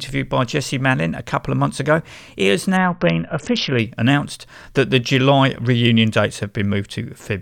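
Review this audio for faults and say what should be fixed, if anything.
Bluetooth SBC bit pool drop from 2.77 to 3.79 s: the link congests and the encoder starves the speech of bits. The upper sub-bands lose their share and the rest are quantised coarsely, leaving dull treble and gritty noise, which fits a bit pool falling from 31 to 6, near 55 kbps. To prevent it, reduce radio congestion or move the headset closer to the phone so the link can hold its full bit pool.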